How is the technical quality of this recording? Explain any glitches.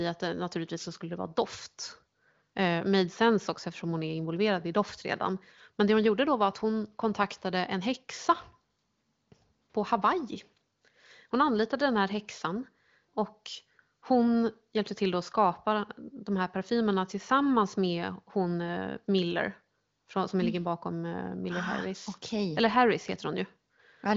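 No glitches or faults heard.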